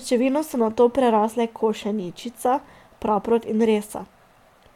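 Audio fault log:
No faults detected.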